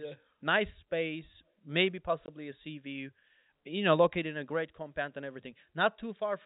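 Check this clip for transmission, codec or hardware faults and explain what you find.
There's one fault worth flagging, a single dropout.

From 2.26 to 2.28 s, between "nice space maybe" and "a sea view you", there's packet loss filled with silence. One 20 ms packet went missing and was replaced by digital silence, so you hear a tiny hole with hard edges.

The band-limited telephone sound comes from G.711 coding.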